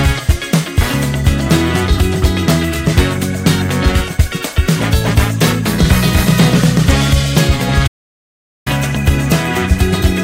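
The player most likely ran out of data or had its playback thread blocked, and this produces a playback stall between 7.87 and 8.67 s. For roughly 0.79 s the output goes completely silent, cutting the audio off in mid-flow rather than at a natural pause. The gap is long enough to be heard plainly as a break. When the player recovers, the sound picks up again at 8.67 s and runs on to the end of the clip.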